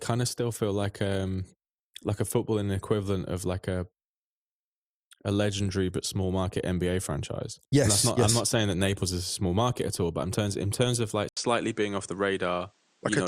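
A speech clip whose character shifts abruptly at 11.29 s, just after "in terms of like". An 80 ms gap opens. From there to the end, nothing reaches above 9.4 kHz, and a faint new noise floor appears, around 40 dB down. Loudness stays level. The likely cause is an input switched to a poorer device.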